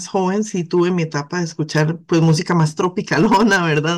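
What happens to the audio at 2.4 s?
Hard clipping is present at 2.4 s, as it is across the whole speech clip. The signal drives about 7 dB past what one stage in the chain can pass, so the loudest peaks are sliced flat at the ceiling, with around 2 percent of samples pushed over it. Those squared-off tops add harmonics high in the spectrum, heard as a crackly, gritty edge on the louder parts of the speech here.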